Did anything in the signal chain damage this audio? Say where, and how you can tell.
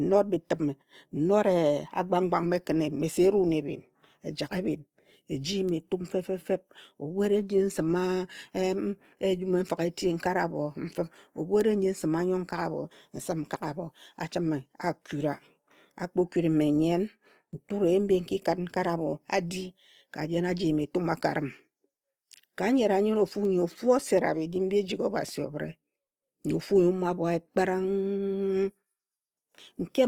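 Yes, at the codec stage: a low-bitrate Opus compression pass in its music-style mode, likely around 24 kbps, runs throughout. Band energies survive but their fine detail is filled in, so the speech keeps full bandwidth yet sounds plainly rough, grainy and noisy.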